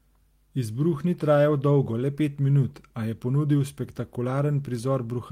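No technical faults can be heard in this speech.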